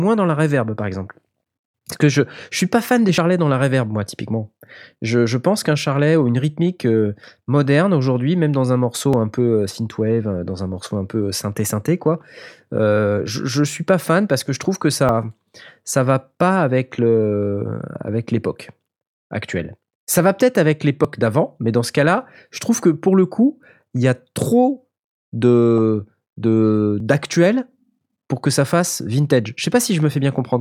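Skips at 3.18, 9.13, 15.09, 21.05 and 27.00 s, such as between "suis pas fan des" and "dans la reverb moi", are audio missing between chunks. Each drops a few tens of milliseconds, likely lost at 6-second chunk boundaries, and the edges butt together without silence, unlike a dropout's gap.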